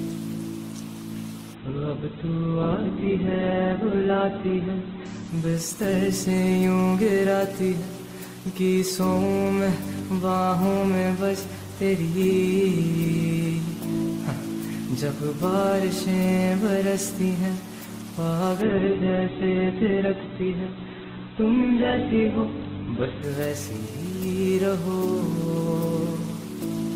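Two call bitrate drops, from 1.54 to 7.13 s and 18.63 to 23.31 s, make the audio coarse and muffled, which fits the encoder falling to roughly 7–8 kbps. On a spectrogram, content above 4 kHz vanishes, leaving a flat ceiling for about 3.0 s and 4.6 s.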